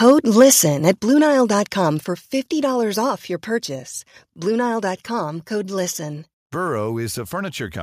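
The first second carries harsh, crackling bursts at 0.08 to 0.12 s, 0.38 to 0.53 s and 0.88 to 0.90 s. This is likely microphone overload. The input level drives the peaks about 2 to 4 dB past the converter's limit. Their tops are flattened, leaving a gritty edge on the loudest syllables.

At 1.02 s the speech and background drop together by about 5 dB. At 2.04 s they drop again by the same amount. This sounds like microphone volume stepped down by the call software after the clipped peaks. Each change is a sudden step, not a fade.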